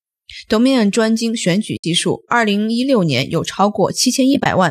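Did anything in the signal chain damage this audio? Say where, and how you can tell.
Yes, at the network and decoder stage: AAC frame loss with muting. From 1.77 to 1.84 s the sound fades to silence and back, and from 4.34 to 4.46 s it breaks into several short holes, the longest around 20 ms. Each gap points to a handful of short codec frames, likely low-delay AAC, that never arrived and were decoded as zeroed spectrum. The overlapping windows soften the edges.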